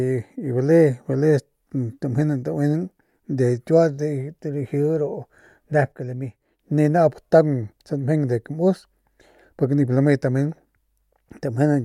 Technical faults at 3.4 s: none

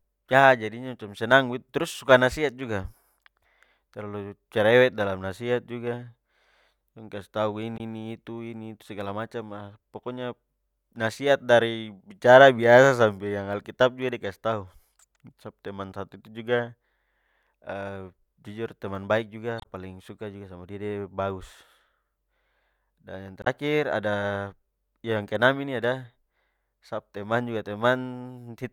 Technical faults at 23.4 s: damaged data in a compressed stream

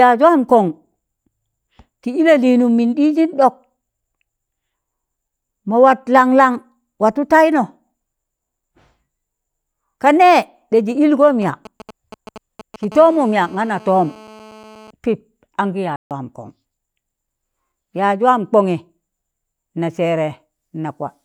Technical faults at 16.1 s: playback stall

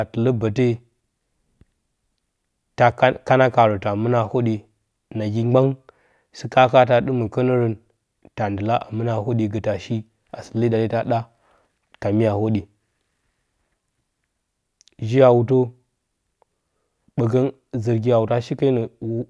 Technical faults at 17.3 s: none

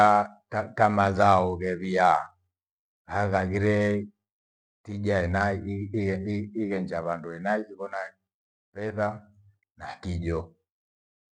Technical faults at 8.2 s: none

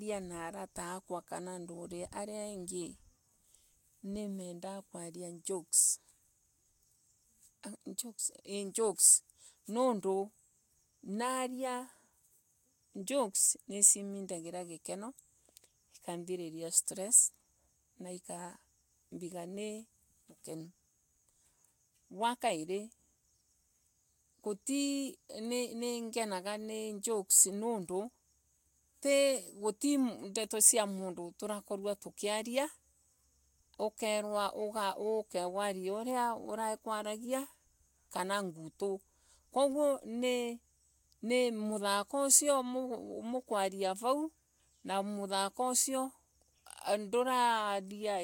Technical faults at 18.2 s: none

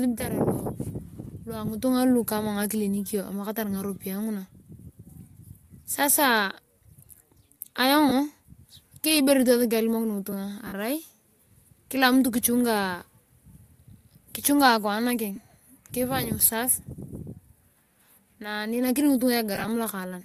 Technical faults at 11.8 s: none

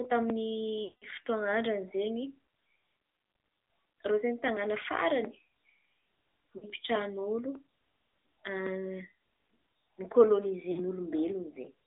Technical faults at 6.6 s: AMR narrowband mobile codec; lost AMR speech frames

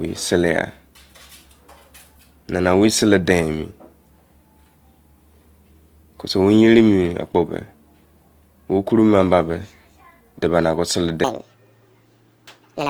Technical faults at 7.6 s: Opus compression

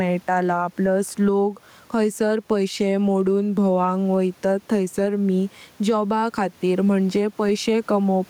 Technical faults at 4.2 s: gain pumping

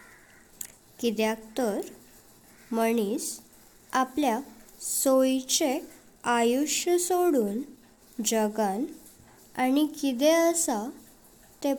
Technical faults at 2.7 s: none

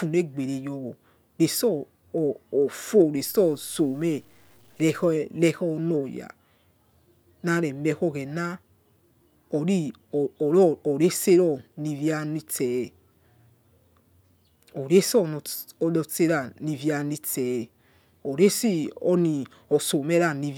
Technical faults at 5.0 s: low bit depth without dither

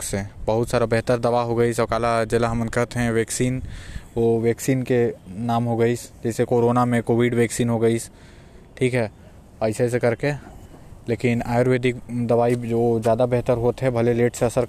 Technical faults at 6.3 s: none

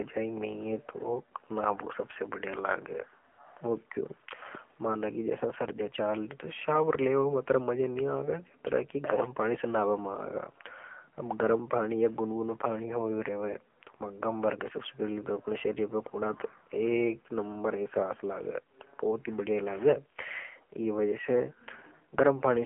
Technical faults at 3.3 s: AMR narrowband mobile codec; AMR comfort noise

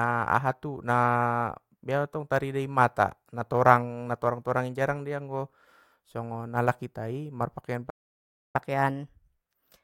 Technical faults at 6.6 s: none

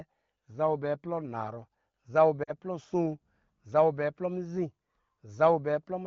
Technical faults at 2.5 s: lost AMR speech frames

